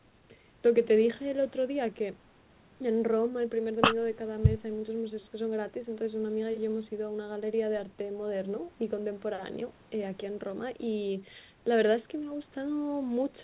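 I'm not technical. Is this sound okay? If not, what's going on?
Yes, this sound is okay, and nothing is going wrong in it.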